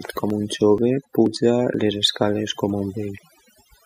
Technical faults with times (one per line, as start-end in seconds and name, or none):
0.00-3.86 overdone noise removal
0.30 audio missing between chunks
0.78 audio missing between chunks
1.26 audio missing between chunks
1.74 audio missing between chunks
2.22 audio missing between chunks
2.70 audio missing between chunks
3.18 audio missing between chunks